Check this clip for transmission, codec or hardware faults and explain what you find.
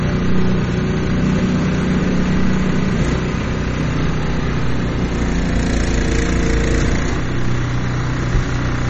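One codec fault runs throughout: MP3 compression, likely at a low rate around 32 kbps. Everything above 8.3 kHz is gone, and the remaining detail swirls watery. That swirling sets it apart from a plain low-pass filter.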